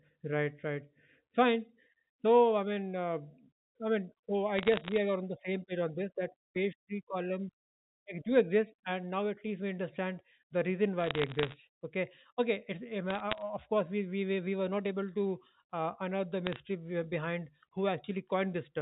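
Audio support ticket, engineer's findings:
Crackle and sharp ticks over intact speech at 4.57–4.98 s (after "I mean so"), 11.00–11.54 s (after "we understand the reason"), 13.10–13.42 s and 16.47–16.56 s (after "uh unearth the"). Bit errors on a digital phone line. Flipped bits in the G.711 mu-law stream each corrupt a single sample, at an error rate of a few tenths of a percent.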